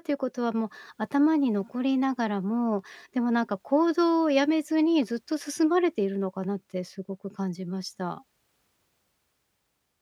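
A speech recording, and nothing is technically wrong with it.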